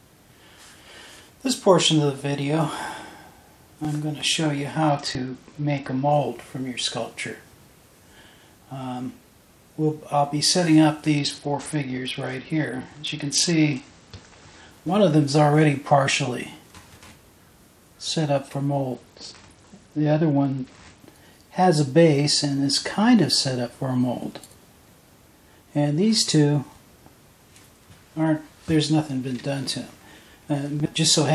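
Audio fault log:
4.89–6.12 s, 11.17–14.71 s and 18.95–21.01 s: Bluetooth SBC bit pool drop. Each time the link congests, the encoder falls from a bit pool of around 31 to around 9, and the rate fits roughly 72 kbps. The upper sub-bands get almost no bits and the rest are coarsely quantised, so treble goes dull and gritty noise rises. On a spectrogram, high-frequency energy collapses abruptly into a flat ceiling with grainy speckle below, then snaps back.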